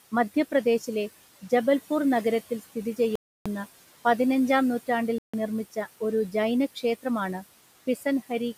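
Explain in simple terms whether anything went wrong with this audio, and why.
A few things went wrong. Throughout, there are noise suppressor artifacts: the room noise gets pushed down between words and creeps back under the speech.

There are two short dropouts, each most likely a Bluetooth stall, where the headphones ran out of audio while waiting for delayed data. At 3.16 s, right after "മധ്യപ്രദേശിലെ ജബൽപൂർ നഗരത്തിൽ സ്ഥിതി", the sound cuts out for about 0.3 s. At 5.18 s, between "പതിനഞ്ചാം നൂറ്റാണ്ടിൽ" and "നിർമ്മിച്ച ഒരു", it cuts out for about 0.15 s.

Near the end, from 7.87 to 8.05 s, there's speech cut by the noise suppressor: it mistook roughly a tenth of a second of speech for background and turned it down, so that bit sounds swallowed.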